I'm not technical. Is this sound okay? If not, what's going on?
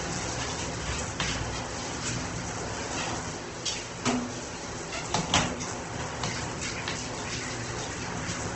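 No. Throughout, the sound is grainy and rough, with a noisy texture where tones should be clean, and it's dull because nothing reaches above 8.3 kHz. That is likely Opus compression squeezed hard: missing detail gets filled with noise, and the top is trimmed off.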